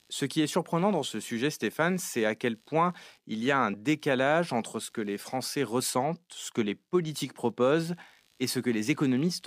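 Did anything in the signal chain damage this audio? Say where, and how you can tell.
Yes. Computer activity noise runs throughout the speech clip, so the damage is in the analogue wiring stage. A low, gritty buzz pulsing at something like 70 times a second sits roughly 40 dB below the speech. It shifts with the machine's workload rather than with the talker. Processor, graphics or mouse load changes modulate the shared ground that the audio circuit references, and that interference rides into the signal before conversion.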